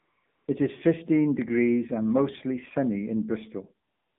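Throughout, the speech passes through the AMR narrowband mobile codec. Everything below 150 Hz and above 3.5 kHz is gone, and the buzzy, synthetic texture fits a low rate near 7.4 kbps. From 0.0 to 0.24 s, 0.26 to 0.48 s and 3.88 to 4.19 s, speech frames stop and AMR comfort noise fills the gap, swapping the real background for smooth, steady hiss that switches in and out.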